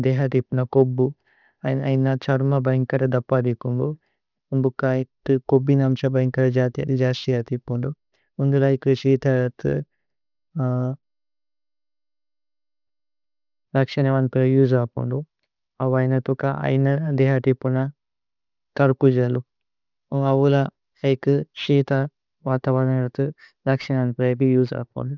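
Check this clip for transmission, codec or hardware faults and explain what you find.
One fault runs through the whole speech recording: aliasing.

Aliasing, present throughout: the sound points to a drop from 48 kHz to 12 kHz without an anti-alias filter, so energy above 6 kHz folds back below it, some 30 dB under the speech. Sibilants turn gritty and metallic. Unlike plain band-limiting, which only dulls, the spectrum runs full right up to the 6 kHz edge.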